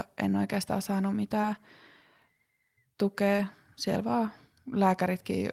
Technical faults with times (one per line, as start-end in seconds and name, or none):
1.41-1.47 short concealed packet loss
3.36-3.40 short concealed packet loss